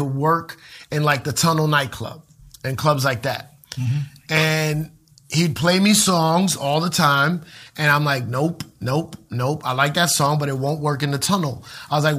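Speech, with two corrupt frame decoded faults: a brief glitch at 4.40 s, and a quieter, longer glitch from 11.59 to 11.67 s spanning several consecutive frames. Flipped bits in each compressed frame made the decoder place energy at wrong frequencies.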